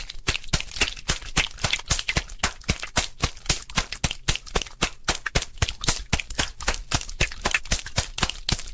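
Throughout, downsampling without an anti-alias filter folds everything above 8 kHz back down. This aliasing is heard as gritty, metallic tones about 10 dB below the signal.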